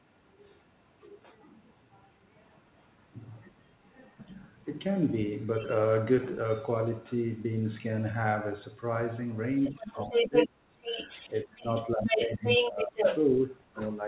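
Faint other-side voice leaking through shows up first at 2.44–2.61 s, around 35 dB under the speech, then louder, about 20 dB down, at 3.86–4.49 s. That's likely loudspeaker echo the canceller didn't fully scrub from the mic. Right after, at 4.65–4.69 s, there's a quick dip of roughly 10 dB, a brief case of speech suppressed in double talk, where the canceller probably ducked everything while both sides overlapped. More leakage follows at 5.54–5.74 s (about 20 dB down) and 6.66–7.42 s (about 25 dB down). The big one runs from 9.07 to 13.97 s, with the far side roughly as loud as the talker. Inside that, from 9.7 to 13.8 s, the talker keeps getting pushed down, by as much as about 25 dB and for around two seconds in total, so the voice sounds chopped and swallowed while the echo keeps going. All of this sits in the narrow telephone band, with nothing above 4 kHz, as expected from G.711 on the call path.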